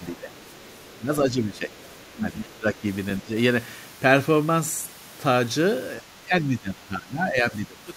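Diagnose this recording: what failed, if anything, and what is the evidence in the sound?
Speech suppressed in double talk in the call processing, likely from echo cancellation. The level drops about 10 dB at 0.0–0.3, 0.93–1.73, 2.14–2.86 and 3.22–3.32 s, and about 20 dB from 6.0 s onward. On the waveform the envelope sags in these stretches.

The other side's voice is leaking through, likely residual echo the canceller failed to remove. A faint second voice, about 30 to 35 dB down, sits at 0.37–0.41, 0.58–0.92 and 1.78–2.07 s. On a spectrogram it shows as weak extra harmonics.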